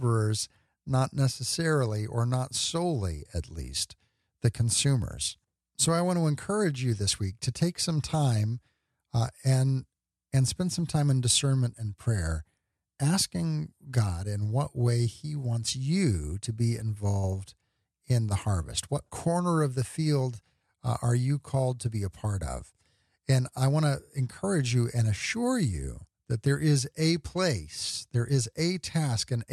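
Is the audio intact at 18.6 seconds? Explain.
Yes, the speech at 18.6 seconds plays through intact, with no dropout, click, distortion or other fault at that moment.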